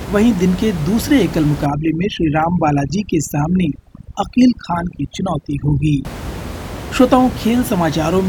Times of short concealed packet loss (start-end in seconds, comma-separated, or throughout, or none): none